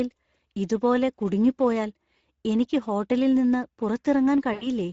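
From start to finish the speech passes through the Speex codec, with too few bits left to code the excitation signal. The damage is plainly audible: a noisy, hoarse roughness sits on every stretch of speech, and the sound fits a Speex stream at about 16.8 kbps.

At 4.53 s, packets drop out in a VoIP packet loss concealed by the speech codec. The decoder repeats its last pitch and filter state at falling gain, which fits four lost 20 ms frames. Until 4.68 s the speech smears into a stretched, fading sound.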